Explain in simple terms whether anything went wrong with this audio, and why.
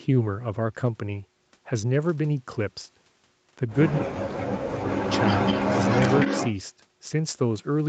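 A couple of things go wrong here, both tied to how the call handled sound coming back from a loudspeaker.

First, there's an echo leak. Around 3.92 to 3.99 s you get a brief, faint scrap of the voice repeated about 0.2 seconds late. Then from 4.86 to 6.55 s it comes back properly: a delayed copy trailing the talker by that same fifth of a second, about as loud as the original. This is likely one end playing the call through a speaker, with its echo canceller failing to scrub what its mic picked up and sending it back.

Right between those, from 4.0 to 4.99 s, the talker's own voice gets pushed way down, a big, obvious dip lasting about a second. That's speech suppressed in double talk, likely because both sides were making sound at once and the echo canceller couldn't tell the real talker from the loudspeaker echo, so it turned everything down together. The overlap with the echo starting at 4.86 s fits that picture.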